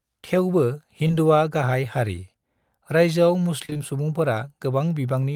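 At 1.07 to 1.11 s, just before "गाहाय हारि", the speech briefly smears. This is short concealed packet loss: about 20 ms of audio never arrived in time, so the receiver filled the hole by extending the preceding sound, following its pitch where voiced or using shaped noise where not, then crossfaded back into the real signal. The patch is brief enough to read as a blur rather than a gap.

From 3.65 to 3.81 s the speech turns choppy, with small pieces missing. This is repeated packet loss producing robotic sound. Four separate dropouts fall within this 0.16 s stretch, totalling about 80 ms, the longest about 28 ms. Each was papered over by continuing the last sound, so roughly half of the stretch is synthetic fill. Because the patches follow one another so closely, the sound turns choppy.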